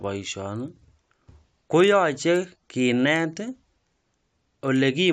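A speech clip with a steady, rough buzz running under the voice for its whole length. The cause is a resampler restarted on every block. The audio was converted from 16 kHz up to 48 kHz in 40 ms blocks. Each block was processed alone, so the filter lacked true neighbouring samples at each edge. Every boundary picks up a small error. These repeat at 25 Hz, a fast ticking buzz that follows the voice and drops away in the gaps.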